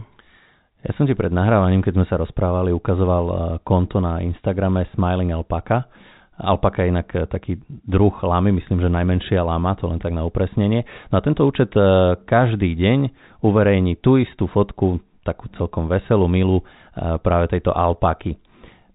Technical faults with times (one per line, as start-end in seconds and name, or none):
none